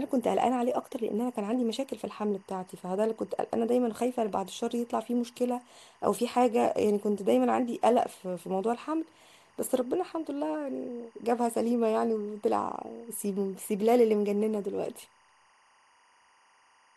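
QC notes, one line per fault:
Throughout: timecode bleed. A faint, steady chirping warble sits behind the speech, roughly 35 dB down. Linear timecode from a neighbouring track or cable is leaking into the audio path. The code is a square wave that flips between two pitches near 1 kHz and 2 kHz as it encodes bits, so it is heard as a buzzy two-tone flutter. Its regular repeating pattern fits 24-frame code.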